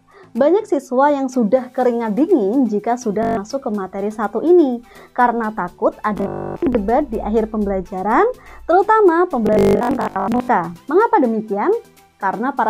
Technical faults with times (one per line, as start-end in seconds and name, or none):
3.23-3.37 Bluetooth stutter
6.18-6.75 Bluetooth stutter
9.47-10.48 Bluetooth stutter